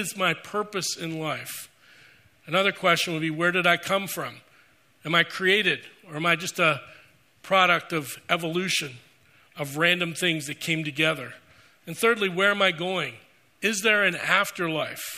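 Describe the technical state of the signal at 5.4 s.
At 5.4 s the signal is intact, with no dropout, distortion, glitch or other fault audible at that point.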